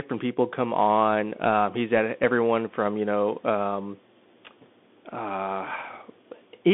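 Bluetooth CVSD headset codec damage runs throughout the speech. One bit per sample steers an adaptive step up or down, and the step can't keep pace with fast high sounds, so s sounds turn scratchy over a granular hiss. The band spans roughly 250 Hz to 3.5 kHz, with nothing above 3.8 kHz.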